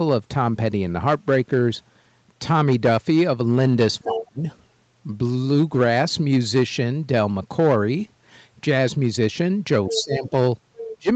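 At 4.02 to 4.44 s the speech dips hard, about 30 dB at its worst, and a short scrap of another voice slips through at 4.14 to 4.19 s, about 10 dB under the talker. That's speech suppressed in double talk, likely because the echo canceller couldn't tell the talker from its own loudspeaker echo and turned both down. The same thing happens at 9.88 to 10.32 s (about 15 dB down) and at 10.84 to 11.09 s (about 25 dB down). The leaking voice is the other side's voice leaking through, likely residual loudspeaker echo the canceller missed. It shows up as fragments at 9.88 to 10.02 s, about 10 dB below the speech, and at 10.77 to 10.94 s, about 15 dB below, overlapping the dropouts each time.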